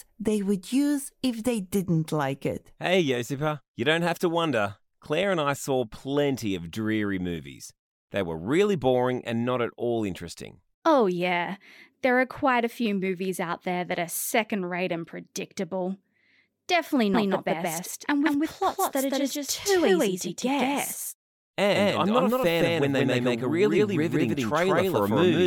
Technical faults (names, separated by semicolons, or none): doubled audio track